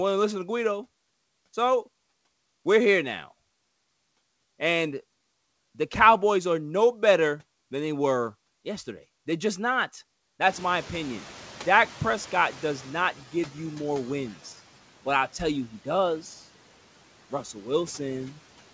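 Noise suppressor catching up, from 10.47 to 13.14 s: right after "just not", the room's background noise jumps by about 24 dB at around 10.5 s, and the suppressor's noise estimate lags. The noise surges through with less reduction at first, then sinks over about 2.7 s as the estimate adapts, ending roughly 7 dB lower by "give you more wins". The band-limited sound, with nothing above 8 kHz, fits a G.722 call path.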